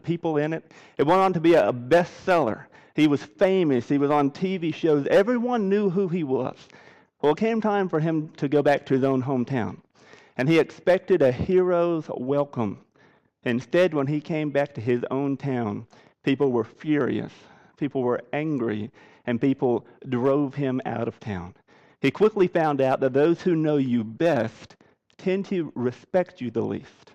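No technical faults can be heard anywhere in this audio; the signal stays stable and continuous throughout.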